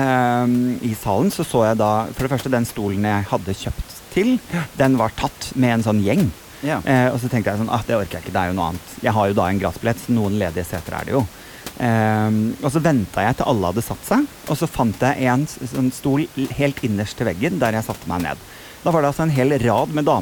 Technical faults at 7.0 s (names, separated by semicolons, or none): none